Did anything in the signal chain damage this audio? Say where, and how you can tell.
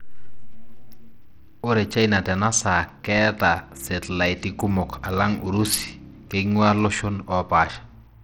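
Yes. At the codec stage, the speech carries plainly audible damage throughout, likely from Bluetooth SBC compression at a starved bit pool, which fits roughly 80 kbps. Treble flickers in and out with gritty noise; a spectrogram shows patchy, blocky upper bands switching on and off.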